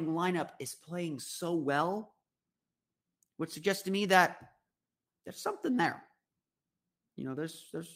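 No technical faults are audible.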